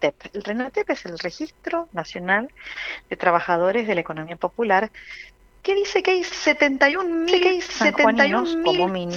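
At 7.28 s a doubled audio track comes in and runs right to the end. A second, full-band copy of the sound sits around a second and a half behind the original and at roughly the same level, so everything plays again on top of whatever follows. There's no tail or room smear on it; it just switches on abruptly. Likely cause is a second, slower capture path feeding the same mix.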